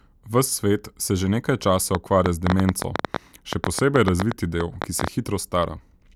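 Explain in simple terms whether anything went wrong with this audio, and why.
Ticking and popping sits on top of the speech from 1.95 s to 5.09 s, about nine clicks a second at an uneven pace, some thirty in all, each one much louder than the talking and audible in the gaps too. This is a train of clicks: short, similar-shaped pulses repeatedly forced into the signal. The likely cause is electrical interference from nearby equipment or a faulty connection or power supply.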